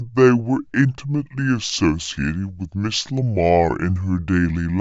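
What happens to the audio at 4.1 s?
At 4.1 s the speech is still running slow and low, as it does through the whole clip. This is a wrong sample rate fault. It plays at two thirds speed and about 7 semitones flat. That fits 48 kHz audio played back at 32 kHz without conversion.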